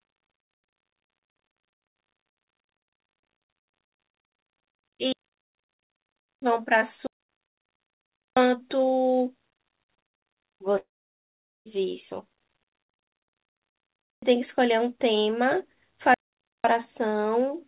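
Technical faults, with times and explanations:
5.12–6.42 s, 7.07–8.37 s, 12.92–14.22 s and 16.14–16.65 s, digital wireless dropout: the sound cuts to near silence, for 1.3 s in the first three and about 0.5 s in the last. Each time the receiver has lost too much data and mutes with a very quick fade, so there is no click or noise burst at either edge. On a waveform these are flat, empty gaps with clean edges. On a spectrogram they are blank vertical bands across all frequencies, which here stop at 4 kHz because of the G.711 call codec.
10.78–11.67 s, long network dropout: about 0.88 s of audio never arrives and is lost for good. The receiver briefly extends the last sound as a fading buzzy hiss, then holds near silence for roughly 0.8 s before the sound resumes further on, with the missing part skipped. The likely cause is a stall in the network path. On a spectrogram, a short smeared, decaying band of noise runs into an empty stretch. 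On the waveform, a tapering tail gives way to a flat line.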